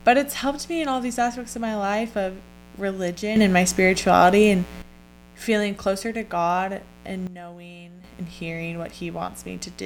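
A mains buzz runs under the speech from start to finish. It is a steady, raspy drone built on 60 Hz, sitting roughly 20 dB below the speech. Its harshness separates it from a plain hum. Sharp switching spikes from something like a dimmer or rectifier, or an unshielded run, leak in twice per mains cycle and spray harmonics well up into the kilohertz range, rather than giving a smooth low tone.

At 3.36 s a sudden gain jump lifts everything by 11 dB until 4.82 s, just before "feeling closer to". At 7.27 s a second drops the level by 12 dB until 8.04 s, ahead of "and hearing". Both edges are instant, not ramped. The likely cause is a digital gain setting applied from one sample to the next. Because the buzz and background noise jump together with the speech, this is a whole-signal level step, not a dynamics processor pumping the voice alone.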